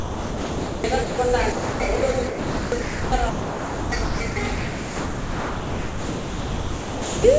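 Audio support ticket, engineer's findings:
Sound chopped by the voice detector: choppy sound, gaps at 0.00–1.18 s (about 0.98 s replaced), 1.52–2.02 s (0.34 s) and 2.28–7.24 s (4.24 s). Likely the sender's VAD toggling, with comfort noise filling the gaps. Coding noise and no content above 8 kHz, consistent with a G.722 call path at 64 kbps.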